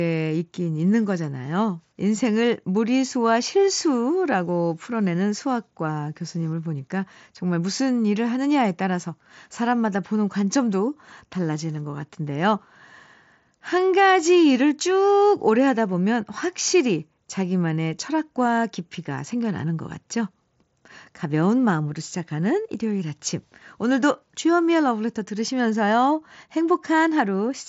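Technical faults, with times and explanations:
Nothing here counts as a fault; the speech comes over a Bluetooth mSBC headset link working as it should, with the band topping out near 7.7 kHz and a light graininess from the codec that's just part of how that link sounds.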